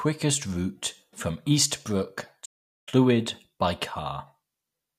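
The player likely ran short of data at 2.45 s, so output went silent until 2.89 s, a playback stall that halts the speech mid-flow before it resumes.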